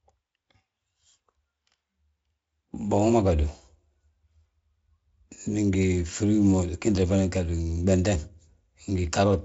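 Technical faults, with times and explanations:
Nothing stood out on listening to this speech, which comes through the Speex codec at a high enough setting that none of its usual roughness can be heard.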